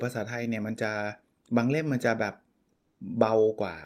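The clip is speech with comfort noise in place of the background from 2.72 to 3.00 s, a stretch of about 280 ms. During that pause the natural background, already about 48 dB below the loudest speech, gives way to a smooth, featureless hiss roughly 14 dB quieter, which then snaps back when sound resumes. The likely cause is discontinuous transmission, of the kind Opus DTX performs: the sender stops transmitting when it detects no speech, and the receiver synthesises shaped noise to cover the gap.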